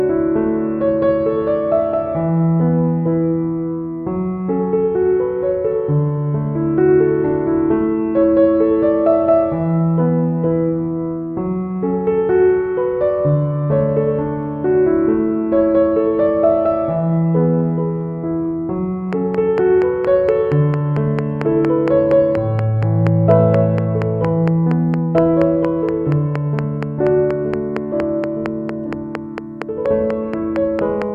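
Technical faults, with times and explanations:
19.13–31.03 s: train of clicks, about fifty evenly spaced pops at 4.29 per second, peaking well above the sound, likely from electrical interference or a faulty connection.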